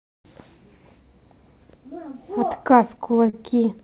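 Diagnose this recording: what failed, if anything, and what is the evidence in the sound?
Repeated stalls (stutter) between 2.92 and 3.35 s point to the network and jitter-buffer stage of the call path. Audio arrived late, the buffer ran dry five times, and the receiver stretched the last sound to cover about 67 ms in total, the longest gap about 33 ms. Nothing is lost, but about 16% of that stretch is filler, so the audio drags and stutters. On a spectrogram, already empty above 4 kHz, the held frames appear as brief smeared horizontal bands. On the waveform they show as short repeated cycles.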